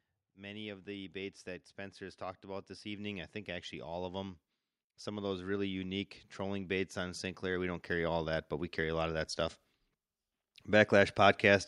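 From 0.34 to 4.39 s, then again from 5.04 to 9.65 s, automatic gain rising lifts the level by about 8 dB and then about 9 dB, as the control treats the input as too quiet. Speech and background swell together, and the waveform envelope and spectrogram brightness climb steadily across each span.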